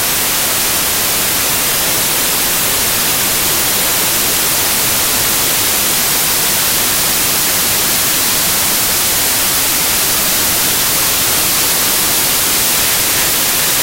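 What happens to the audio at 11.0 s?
At 11.0 s the audio is buried under loud, harsh broadband noise, because the whole clip suffers from samples built from the wrong bytes, from start to finish. The reader misassembles each sample's bytes, so the rapidly fluctuating low-order bits land in the most significant position and dominate every value. The everyday sounds underneath are swamped by broadband noise.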